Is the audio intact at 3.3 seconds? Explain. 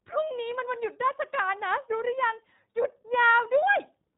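No. At 3.3 seconds the speech carries iLBC codec damage, as it does across the whole clip. The codec rebuilds each short frame on its own, without leaning on the one before. It uses 20 ms frames at a low rate, about 15.2 kbps. Nothing above 3.8 kHz comes through, so the speech sounds muffled and narrow. The voice also has a plainly audible rough, synthetic edge.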